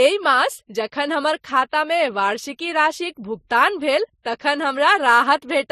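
From start to finish the speech carries two kinds of smear at once, with nothing above 14.8 kHz. That's most likely transcoding between lossy codecs, which fits a low-bitrate MP3 re-encoded to Vorbis.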